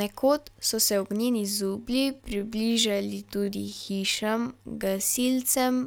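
From about 1.45 s to the end, the speech abruptly slows to about 0.62 times its pace at unchanged pitch, sounding dragged, likely a time-stretched section.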